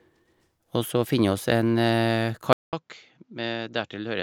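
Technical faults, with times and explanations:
2.53 to 4.22 s, input switched to a poorer device: after a 200 ms silence the speech comes back roughly 10 dB quieter and duller, with nothing above 7.5 kHz and a faint new noise floor, likely because the recording moved to a narrower-band microphone.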